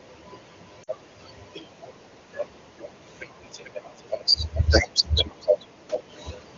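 Lost AMR speech frames at 0.83 to 0.89 s interrupt this wideband speech recording with a brief drop toward near silence lasting about 40 ms, which fits two consecutive frames failing their checksum, so the decoder stretched the last good pitch and vocal tract settings at falling gain. Echo leak follows at 2.77 to 2.89, 3.64 to 3.71, 3.95 to 4.33, 5.03 to 5.25, 5.41 to 5.66 and 5.93 to 6.03 s, heard as a delayed copy of the voice trailing 439 ms behind. It is faint early on and loudest near 5.0 and 5.9 s, where it comes within about 10 and 5 decibels of the speech. The likely cause is a far-end speakerphone whose echo canceller let part of its loudspeaker pickup return down the line.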